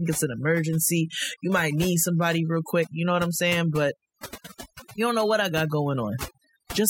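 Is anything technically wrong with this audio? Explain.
Yes. Overdone noise removal runs throughout: aggressive spectral gating shuts off bands near the noise estimate, leaving near-silent, twinkling gaps and taking quiet parts of the voice with them.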